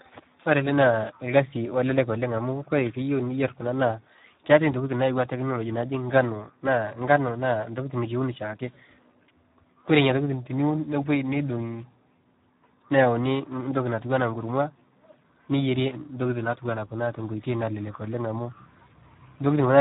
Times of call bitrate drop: none

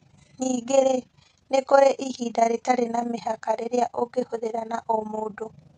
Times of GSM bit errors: none

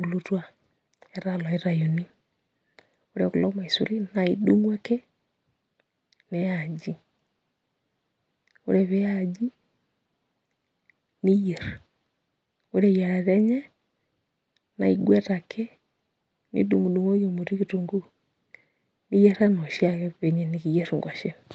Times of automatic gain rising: 0.28-4.19

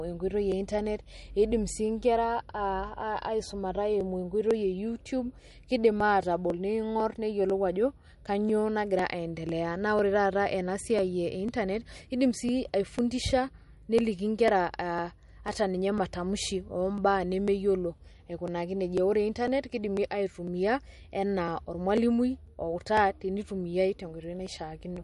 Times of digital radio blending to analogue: none

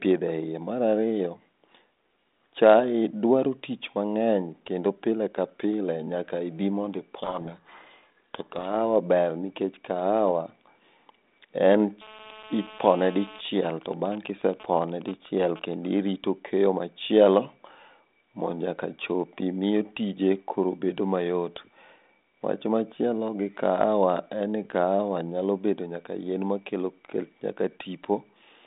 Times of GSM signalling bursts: 13.45-15.86

